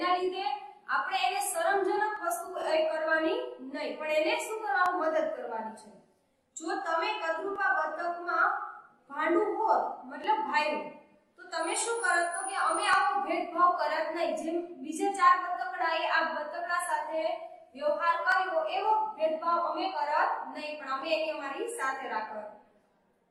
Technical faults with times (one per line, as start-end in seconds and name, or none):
2.17-21.02 clock drift buffer slips